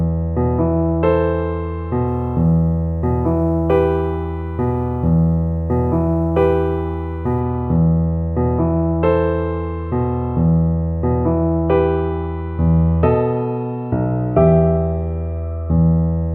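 From 2.07 to 7.41 s the audio picks up sample clock jitter. The converter's timing wanders by a couple of microseconds, so each sample is captured slightly off its proper instant. The resulting error sits roughly 45 dB below the signal and is heard as a fine hiss or grit that follows the sound itself. Unlike steady background noise, it swells on loud, bright passages and disappears when the sound goes quiet.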